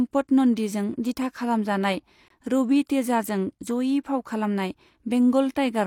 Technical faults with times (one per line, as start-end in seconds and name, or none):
2.28-2.30 gap between stream segments